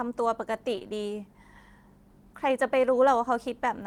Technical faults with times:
0.75-0.84 short concealed packet loss

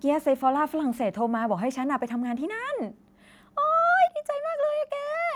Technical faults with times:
4.08 microphone volume stepped down

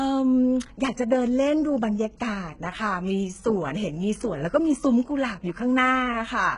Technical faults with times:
0.00-6.57 HE-AAC compression

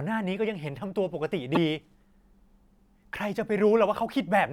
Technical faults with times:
1.55-1.57 damaged data in a compressed stream

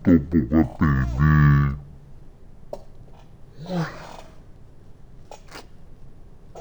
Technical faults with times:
0.00-6.60 stereo read as mono

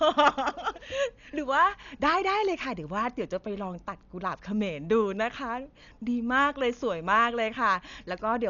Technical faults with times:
0.00-8.50 Dolby Digital compression

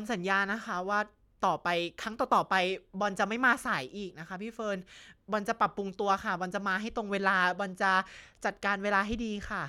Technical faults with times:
none

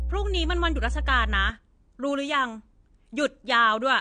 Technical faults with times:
0.00-4.00 AAC compression
0.00-1.50 mains hum

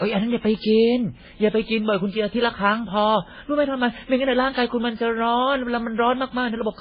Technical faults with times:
0.00-6.80 transcoding between lossy codecs

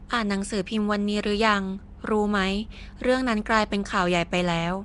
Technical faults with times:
0.00-4.84 Nellymoser compression

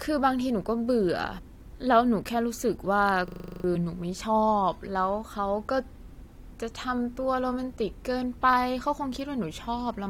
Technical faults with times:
1.37-1.39 damaged data in a compressed stream
3.28-3.64 system hang loop
3.74 damaged data in a compressed stream

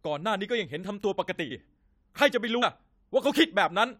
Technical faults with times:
1.50 compressed frames skipped
2.61 compressed frames skipped

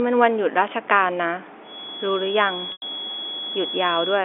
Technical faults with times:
1.60-4.24 feedback whistle
2.72-2.82 packet loss with pitch repetition

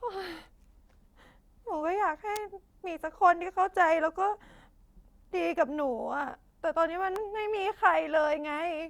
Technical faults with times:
2.36 electrical switching spike
7.16 electrical switching spike

